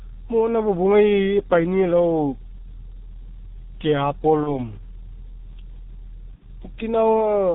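The whole clip runs through a G.723.1 codec, heavily, probably around 6.3 kbit/s. Speech comes out muffled, hoarse and band-limited, with smeared consonants from slow 30 ms frames.

From 0 to 2.0 s there's a switching supply whistle, a thin, faint tone around 11.5 to 11.6 kHz, well below the speech, from a power supply singing audibly.

Around 4.43 to 4.59 s and again at 6.35 to 6.45 s there's VoIP packet loss concealed by the speech codec. The decoder extrapolates, so speech turns briefly stretched and fading, and stays weak until it recovers. The gaps fit one and two 30 ms frames.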